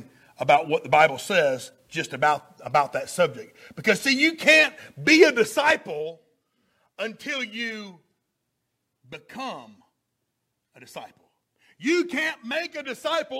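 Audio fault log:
No faults heard.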